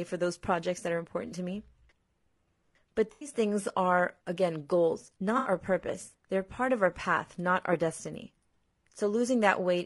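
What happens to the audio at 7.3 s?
At 7.3 s the speech carries the same damage heard throughout the clip, most likely low-delay AAC compression of the AAC-ELD kind used in video calls, at a rate that sounds like about 32 kbps. Its short low-delay frames code about 500 frequency lines each, and the few bits available get spread thin. The voice comes out plainly rough and grainy, with noise filling the gaps between harmonics and a thin, synthetic-sounding top band.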